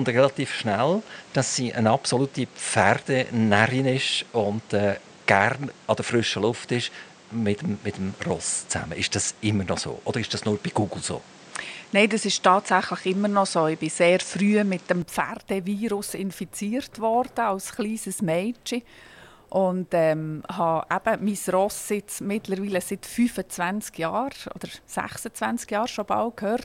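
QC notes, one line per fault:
0.0–15.02 s, input switched to a poorer device: the sound is dull, with nothing above 9.3 kHz, background noise roughly 30 dB under the signal, and the level shifting by about 5 dB at 15.02 s with no gap, likely from a narrower-band microphone. On a spectrogram there is a flat ceiling that lifts abruptly, and the waveform shows a step in level.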